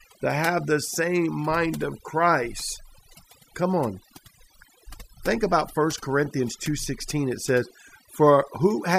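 Speech with overdone noise removal running the whole way through. A noise reducer set too hard keeps switching individual frequency bands down or off. The pauses fall to near silence with twinkling specks. The quieter parts of the voice go too.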